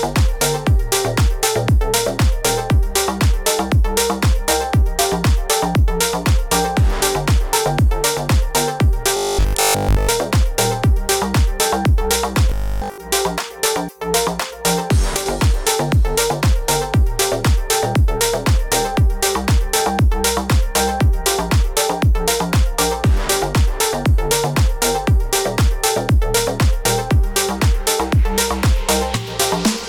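From 9.17 to 10.11 s, and again from 12.50 to 12.98 s, the sound turns into robotic sound from repeated short buffers: a rigid, metallic buzz pitched at 50 Hz that roughly tracks the underlying audio. The likely cause is audio arriving too late, so playback keeps looping a 20 ms chunk. Most of the first stretch is replaced this way, and essentially all of the second. Unlike clicks or dropouts, the audio never goes silent. A fixed tone replaces it.

At 15.17 to 15.26 s, one channel drops out. The level falls abruptly by about 6 dB and then recovers, which points to a likely loss of one stereo side before the mono sum. What sets this apart from a brief gain dip or gap is that the sound continues at reduced strength instead of muting, and the drop is a clean step.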